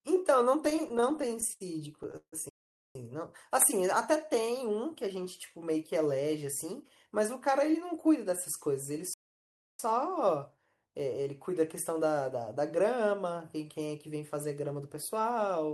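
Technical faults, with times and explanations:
0.65–2.34 s, repeated stalls (stutter): the speech catches and drags through 19 short gaps, the longest 156 ms, where late packets left the buffer empty and the last sound was stretched and faded to cover it. About 391 ms is filled and nothing is lost. Spectrograms show smeared, repeated slices.
2.49–2.95 s, playback stall: the speech stops dead for about 459 ms, then carries on. The likely cause is the player running out of data or its thread being blocked. The waveform shows a flat, silent block mid-phrase, and the spectrogram a clean vertical blank band.
3.99–4.65 s, jitter buffer slow-down: the speech runs at 92% speed while pitch stays put, as single pitch periods were repeated to add 61 ms of reserve. Sounds are drawn out, and harmonics stretch horizontally without shifting in frequency.
6.64–10.58 s, jitter buffer speed-up: the speech runs at 105% speed at unchanged pitch, sounding slightly hurried, as short pitch-period pieces totalling around 200 ms were cut to shrink an overfull buffer. 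Harmonics stay level while syllables compress, with tiny splice discontinuities in the waveform.
9.14–9.79 s, playback stall: within the sped-up stretch the sound cuts out for about 654 ms and then resumes, likely from the player starving or being blocked. It appears as a flat silent gap in the waveform and an empty column in the spectrogram.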